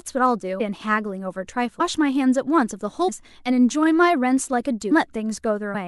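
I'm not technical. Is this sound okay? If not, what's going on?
No. Compressed frames skipped at 0.59, 1.79, 3.07, 4.90 and 5.74 seconds: at each point the speech jumps forward, losing roughly 0.7, 0.7, 0.3, 0.4 and 0.2 seconds of audio. The file stores sound in small chunks, here apparently about 26 ms each, and whole runs of chunks were missing or rejected as damaged, so playback leaps ahead. Neighbouring chunks overlap, so each jump is a short smeared blip, not a sharp click.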